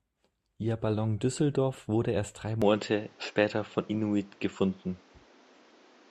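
From 2.62 s to the end, the speech turns duller with nothing above 7.6 kHz, a level shift of around 5 dB and new background noise, likely an input switched to a poorer device.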